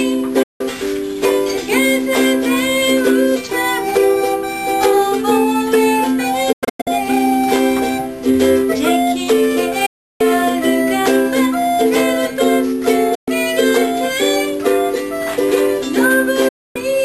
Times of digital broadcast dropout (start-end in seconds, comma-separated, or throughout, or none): 0.43-0.61, 6.52-6.87, 9.86-10.21, 13.15-13.28, 16.48-16.76